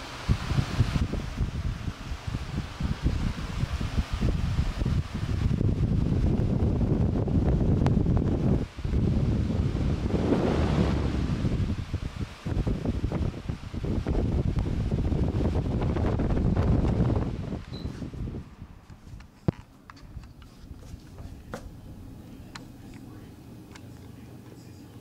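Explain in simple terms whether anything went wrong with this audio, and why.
Two loud pops break into the audio, at 7.87 s and a slightly softer one at 19.49 s. Each is one short, sharp click. A sudden electrical jolt from a plug, switch or static is the likely cause. The sound continues underneath.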